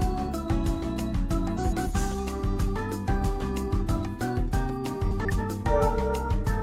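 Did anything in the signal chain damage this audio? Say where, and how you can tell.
Yes: frames out of order at 1.57 to 1.87 s and 5.11 to 5.39 s. Two neighbouring blocks of about 139 ms (which fits three codec frames each) reached the decoder swapped in the network, so each stretch plays halves exchanged: garbled flutter, no time lost.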